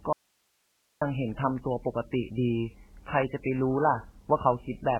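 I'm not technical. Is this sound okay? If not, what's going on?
No. From 0.13 s to 1.01 s, a stretch of a little under nine-tenths of a second, the speech vanishes abruptly and only a very faint hiss remains. That is an audio dropout to a faint residue. It is not a natural pause or a fade: the sound switches off and back on sharply. This is likely a brief loss of the incoming signal while the recording chain kept running and capturing its own background noise.

Throughout the clip, the speech is dull and muffled, with nothing above about 3.1 kHz, so the crisp top end of consonants like s and t is missing. It also has a watery, swirling quality. This is likely heavy MP3 compression. When the encoder has very little data to work with, it discards the treble entirely and keeps only the strongest parts of the sound. Weaker details flicker in and out from moment to moment, which causes that unsteady, underwater character.

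At 3.43 s, a sharp onset in the speech is preceded by a tiny burst of hiss and sounds softened. That is pre-echo. The compression handles audio in short chunks and spreads its noise evenly across each chunk. When a sudden loud moment lands late in a chunk, the noise meant to be hidden under it also spills into the quiet instant just before, so you hear a short hiss arriving ahead of the attack.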